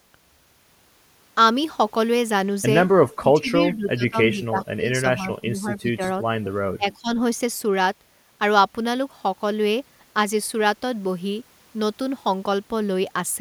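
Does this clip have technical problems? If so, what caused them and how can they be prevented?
Yes. The speech dips sharply from 3.19 to 4.17 s, by roughly 20 dB, then again from 4.33 to 6.02 s and 6.77 to 7.19 s, around 15 dB each. That's likely speech suppressed in double talk, where the echo canceller ducked the talker because it couldn't separate them from loudspeaker echo. Prevent it with headsets or a better-tuned, double-talk-aware echo canceller.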